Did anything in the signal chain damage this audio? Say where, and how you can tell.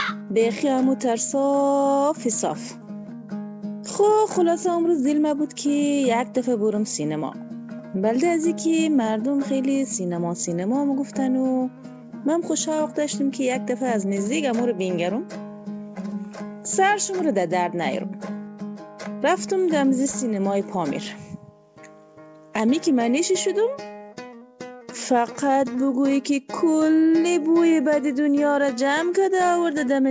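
No, nothing in the signal chain damaged this audio.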